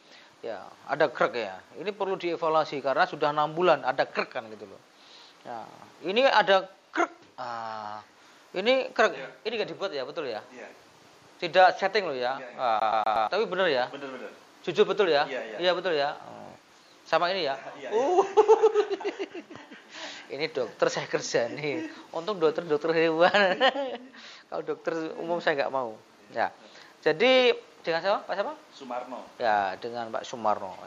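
From 12.80 to 13.28 s, a scratch makes the laser jump back one track at the same point on each turn of the disc. The player is stuck on one turn, so a 120 ms loop of the sound repeats four times, each time cut by a brief mute, giving the quick, even stutter of a skipping CD.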